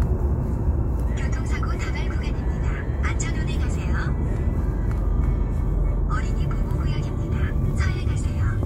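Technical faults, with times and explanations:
No technical faults can be heard in these sounds. There is nothing to time or explain.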